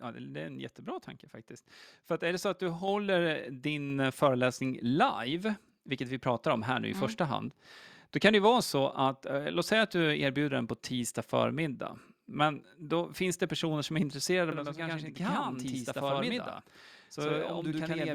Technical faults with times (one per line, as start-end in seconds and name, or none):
2.88 microphone volume stepped up
3.90 microphone volume stepped up
14.52-18.14 channel delay (doubling)